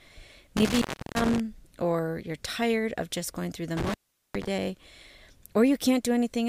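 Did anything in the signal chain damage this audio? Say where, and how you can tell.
Yes: intermittent contact in the analogue wiring, 0.57–1.40 s (before "or you're tired of") and 3.77–4.47 s (after "just going through the"), dropouts of roughly 340 and 410 ms. Crackle at the edges and faint hiss while the line is open set it apart from digital dropouts.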